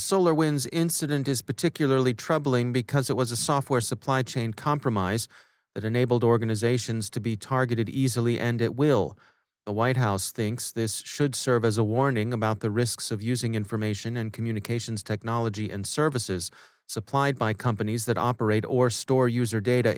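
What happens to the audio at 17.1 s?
Nothing goes wrong at 17.1 s; the speech continues intact there, carried through the Opus voice compression without a fault.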